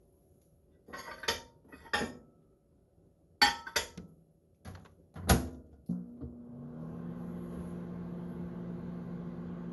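Throughout, the audio sounds swirly, smeared and hollow, with blurred attacks and nothing above 11.9 kHz: likely generation loss from around four passes through MP2, fitting 96 kbit/s.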